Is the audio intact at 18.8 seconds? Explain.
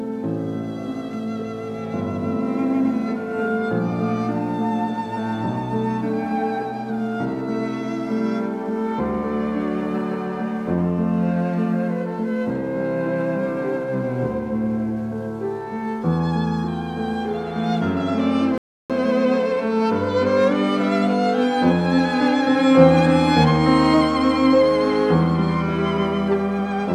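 No, 18.8 s falls inside a playback stall from 18.58 to 18.90 s: the sound drops out for about 0.32 s, likely because the player starved of data, then resumes.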